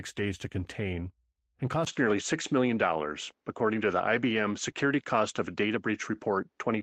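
At 1.85 s, just after "days to contain and", the sound drops out for 20 ms. It then turns duller to the end, with nothing above 7.6 kHz, a level shift of about 5 dB and a faint new noise floor. The input likely switched to a poorer device.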